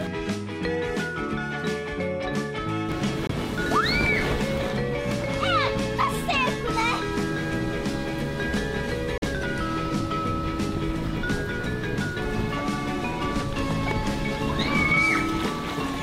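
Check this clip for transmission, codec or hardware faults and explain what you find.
Two kinds of fault show up: short skips where the sound jumps ahead, and brief silent gaps.

At 2.92 s, 4.06 s and 10.01 s the audio jumps forward with no silence, losing a few milliseconds at the first two and around 10 ms at the last. This is likely a dropped buffer (overrun): samples weren't read before being overwritten, so the surrounding audio is spliced together.

At 3.27 s the output goes silent for 21 ms, and at 9.18 s for 43 ms, then resumes further along, as if it had kept playing. That points to a likely Bluetooth dropout, with late packets discarded. The longer gap fits two lost packets.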